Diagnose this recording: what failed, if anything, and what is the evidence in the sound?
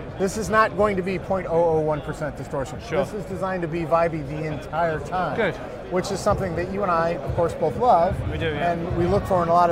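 Nothing in the audio points to a failure at any stage from capture to playback.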